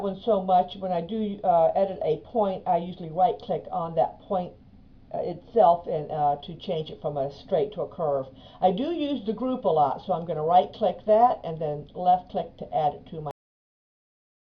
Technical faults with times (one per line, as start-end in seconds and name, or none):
13.31-14.43 cut-off end